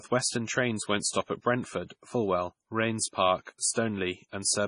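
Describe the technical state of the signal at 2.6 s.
MP3 compression damage is present at 2.6 s, as it is through the whole clip, and it is likely the cause of what is heard. The encoder divides the sound into frequency lines and, starved of bits at what sounds like a rate near 24 kbps, drops weak lines that flicker on and off between frames. The result is heavy damage: a watery or swirly texture, metallic chirps on s sounds, smeared attacks, and nothing above 10.5 kHz.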